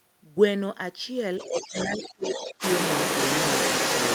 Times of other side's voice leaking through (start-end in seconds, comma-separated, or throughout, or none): 1.38-4.15